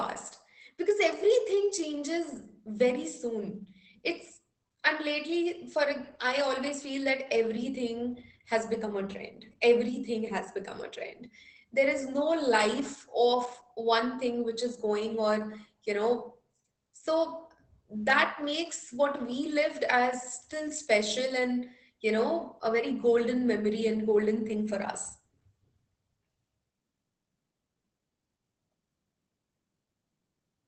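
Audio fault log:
Throughout: Opus voice compression. The speech sounds muffled, slightly hoarse and faintly robotic, with nothing above about 8 kHz and a coarse, buzzy texture under the vowels and consonants. This is the wideband SILK linear-prediction mode of Opus running at a low rate, which fits roughly 12 kbps. The band is cut at 8 kHz and the excitation is quantised crudely, so the damage stays plainly audible across the clip.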